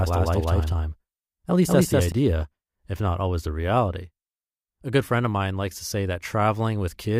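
A doubled audio track runs from the start of this speech clip to 2.12 s, where it cuts off abruptly. A second full-band copy trails about a fifth of a second behind at roughly equal level, with no decay or room colour, likely from a slower second capture path.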